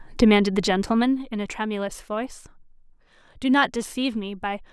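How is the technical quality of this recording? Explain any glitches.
Nothing stood out on listening to this speech recording, and there are no glitches to explain.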